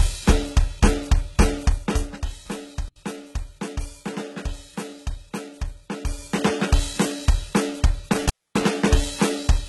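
Throughout the music, the treble above about 11.8 kHz is absent and what remains up high sounds synthetic and gritty. The heavy damage points to HE-AAC compression at a low rate, likely around 16 kbps, with spectral band replication faking the top end. Unlike plain low-pass filtering, the upper band is still present but is rebuilt rather than original.

From 1.61 to 2.31 s, zipper noise rides on the music as the level falls by roughly 10 dB in unsmoothed steps, around a hundred per second. Each step clicks, so the fade ticks instead of gliding, and the sound never actually cuts out.

Intermittent contact breaks the signal at 2.87 s, opening for 77 ms, and again from 8.12 to 8.72 s, opening for 258 ms. A loose connection drops the music with crackle at the edges and leaves hiss behind. That crackle and hiss separate it from a clean digital dropout.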